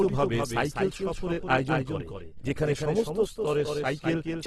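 From the very start and right through, the speech has a second copy trailing it by about a fifth of a second, roughly 5 dB quieter, and dry, with no room tail. That's a doubled audio track, most likely a slower second capture path feeding the same mix.

Running the whole length too, the sound comes out grainy and rough, with nothing above about 12.3 kHz. That points to Opus compression at a low bitrate, somewhere around 16 kbps in its music mode, which keeps band energy but fills gaps with noise.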